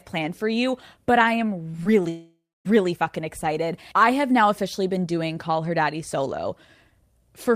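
Just after "for you but I", short concealed packet loss at 1.71–1.75 s and 1.83–1.87 s: about 20 ms each went missing and was patched, leaving brief smears. From 2.09 to 2.67 s the speech turns into a fading buzz or hiss that decays toward near-silence. This is likely a long network dropout, and the speech resumes at "fucking excited I have" with the gap lost.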